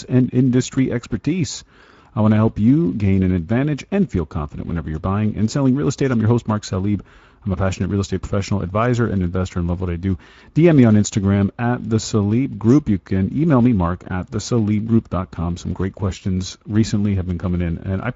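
Across the whole speech clip, the speech sounds grainy and hoarse. These are Speex codec artefacts: the CELP coding starves the excitation, which fits a middle setting near 17 kbps.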